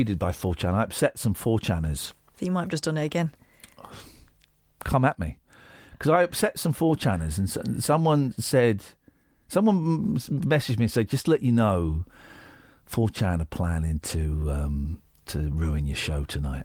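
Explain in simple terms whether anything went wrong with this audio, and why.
Nothing went wrong with this speech recording; no faults are present.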